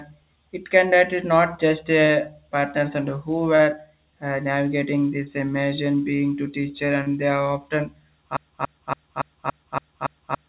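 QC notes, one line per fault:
2.06, 3.56, 5.24, 6.16, 7.03 s: short concealed packet loss. About 30 ms gaps are filled by extending the preceding sound, so you hear brief smears, not exact repeats.
8.37 s to end: broken-record loop. One 0.28 s fragment repeats identically back to back, likely from a stalled stream resending its last piece, so the rest is lost.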